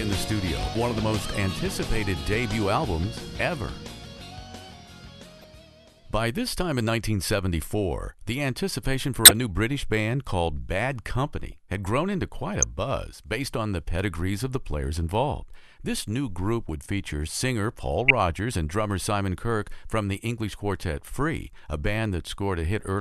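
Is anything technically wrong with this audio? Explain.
Yes. There are five short instances of a corrupt frame decoded, at 5.41–5.44 s, 9.25–9.31 s, 11.52 s, 12.62 s and 18.08–18.11 s. Damaged bits in the compressed stream led the decoder to apply wrong gains or misread codes, so energy landed at wrong frequencies for roughly a frame's duration. Each one is a brief chirp or burst of noise. The bursts at 5.41 and 11.52 s are faint, and the other three peak near full scale.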